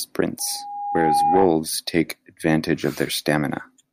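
From 0.39 to 1.56 s the microphone picks up its own loudspeaker, and the loop gain climbs above one at a single frequency. This is loudspeaker feedback squeal: a tone near 813 Hz swells over roughly 0.7 s until it sits about 5 dB above the speech.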